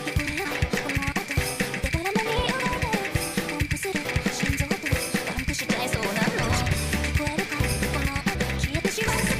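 Damaged data in a compressed stream appears at 0.44 s and again at 8.34 s, each a brief blip. Corrupted bytes in the coded frames there make the decoder misread them and lose sync until it finds the next valid frame header.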